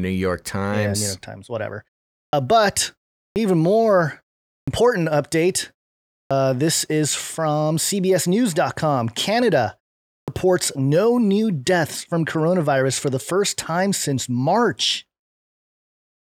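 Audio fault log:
2.26, 3.29, 4.61, 6.24, 10.2 s: clipped start after a pause. After 0.39 to 0.57 s gaps, the device wakes late and about 65 to 77 ms of onset vanishes, as at "this is from"; unlike muted pauses, sound is lost.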